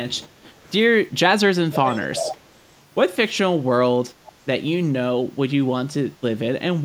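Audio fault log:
1.73–2.36 s, echo leak: a copy of the speech returns 349 ms late, about 10 dB below it, heard as a trailing second voice. This is likely from a loudspeaker whose echo canceller let part of its microphone pickup through. It differs from reverberation by being one distinct repeat at a fixed lag.
4.11–4.23 s, background gated by the echo canceller: the room sound dips by up to about 6 dB for roughly a tenth of a second, then recovers. The canceller turned the microphone down while its loudspeaker played. This is a drop in background, not an added delayed copy as with echo.
4.26–4.32 s, echo leak: a brief scrap of the same delayed copy, again 349 ms behind, now about 25 dB under the speech. This is likely the same canceller leaking again. The identical lag marks it as echo rather than a stray sound, despite its low level.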